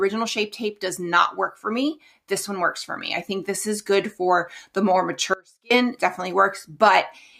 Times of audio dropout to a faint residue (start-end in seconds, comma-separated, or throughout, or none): 5.34-5.71